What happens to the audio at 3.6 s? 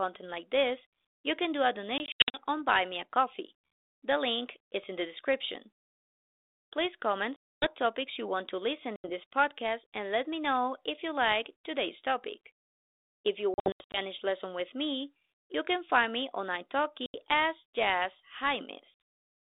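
Nothing goes wrong at 3.6 s: the speech carries on intact through that moment, heard through the narrow telephone band of a 32 kbit/s G.726 ADPCM link working as it should.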